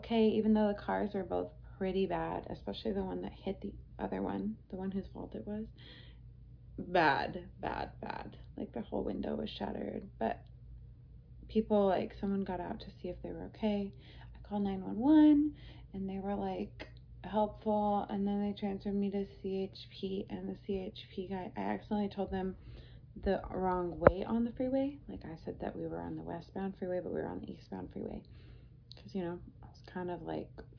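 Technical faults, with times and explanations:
No technical faults are audible anywhere in the recording.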